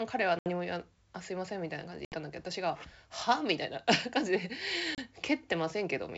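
At 0.39 to 0.48 s, 2.05 to 2.16 s and 4.95 to 4.99 s the speech drops into hard-edged silence, about 70 ms, 70 ms and 30 ms of lost audio, each a handful of packets: packet loss on an ADPCM call. Unlike a clean dropout, the speech comes back wrong, slightly distorted, because the decoder's predictor and step size have drifted from the sender's and need some tens of milliseconds to realign within the G.722 stream.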